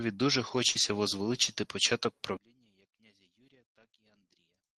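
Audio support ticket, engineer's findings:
Short concealed packet loss, 0.71 to 0.77 s. Brief smear where about 40 ms of audio never arrived in time; the receiver stretched the preceding sound over roughly 32 ms, then crossfaded back. Component: jitter buffer and decoder concealment.

Lost packet rebuilt from error correction, 0.75 to 0.81 s. No gap, but a rougher, noisier 40 ms stretch, which points to two lost packets replaced by the low-bitrate Opus in-band FEC copies carried in the following packets. Component: decoder FEC recovery.

One channel inverted, 2.37 s to end. Level collapses by about 35 dB, leaving only a faint residue. Likely cause: one stereo channel polarity-reversed, so the shared centre content cancels on mono summing. Component: capture or channel routing ahead of the encoder. The call path itself shows the expected Opus coding noise and a 12 kHz upper band limit.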